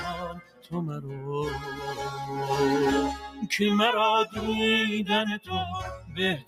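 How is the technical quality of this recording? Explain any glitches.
The recording is compromised by processing rather than clean: a speech-oriented noise suppressor is working on material it wasn't designed for, and in three places it bites harder.

Noise suppressor applied to music or sounds, across the whole clip: the processor treats sustained tones, ambience and decay as unwanted noise and pulls them down, while transients pass more readily. Its gain moves by around 10 dB, so the sound swells and sinks, pumping and losing its sustained body as held portions are pushed down against the attacks.

Sound cut by the noise suppressor, at 0.14 to 0.73 s, 3.26 to 3.46 s and 5.97 to 6.18 s: here the suppressor classifies the sound itself as noise and reduces it beyond the general swing, by about 16 dB in the first span, about 7 dB in the second and about 8 dB in the third. The first cut lasts about half a second and each later one about 0.2 s. 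Sustained or decaying sound in these spans drops away or has its tail clipped short, while abrupt onsets largely survive.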